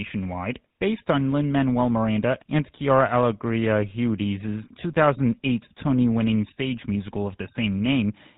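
The speech has a buzzy, gravelly roughness from start to finish, and everything above 4 kHz is missing, so it sounds dull and boxed-in, with the damage plainly audible. This is the GSM full-rate codec, and the character fits its 13 kbps mode: it models the vocal tract and drives that model with a coarse, regularly spaced pulse excitation that keeps only every third sample, which produces the grainy buzz over the narrowed telephone band.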